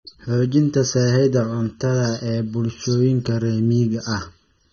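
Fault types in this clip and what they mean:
Channel delay (comb filtering): One channel arrives a fraction of a millisecond late, and summing both to mono cancels shared content at evenly spaced frequencies, the first around 700 Hz, then roughly every 1.4 kHz. The speech sounds hollow and phasey throughout.
AAC compression: A low-bitrate AAC-LC encode, likely near 24 kbps, has discarded detail to save data. Nothing remains above about 6.9 kHz, so the speech sounds dull and muffled, with plainly audible smearing and a warbly, fizzy texture on sustained sounds and sibilants.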